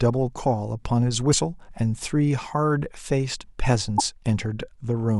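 At 1.30 to 1.34 s there's a quick glitch in the speech, and another at 3.96 to 4.00 s, each only about 40 ms long. Both are damaged data in the compressed stream: some of the data got corrupted, so the decoder misreads those frames, loses its sync and hunts for the next valid frame header. The brief glitch is what plays out while it's searching.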